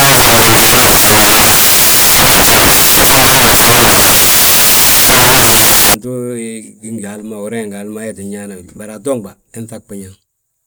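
Samples built from the wrong bytes run from 0.00 to 5.94 s. Each sample is assembled from wrongly paired bytes, so its fast-changing low bits become the dominant part of the value. The speech turns into loud, harsh broadband noise, close to white on the louder sounds.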